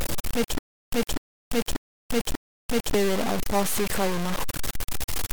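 From the start the speech carries harsh, grainy distortion that rises and falls with the signal, nearly as loud as the speech itself. This is likely low bit depth without dither, around 3 bits truncated, not steady hiss. From 0.58 to 2.94 s, a stutter with silent gaps follows: the same 250 ms fragment repeats four times, each followed by 340 ms of dead silence, likely a stalled stream retrying, unlike a simple dropout.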